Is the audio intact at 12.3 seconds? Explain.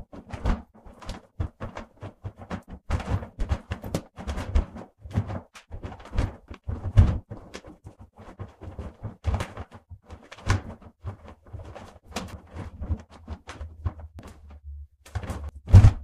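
No, at 12.33 s compressed frames are skipped: roughly 0.7 s of sound, about ten frames of about 93 ms, vanishes, so the audio jumps ahead rather than leaving a dropout's silent gap.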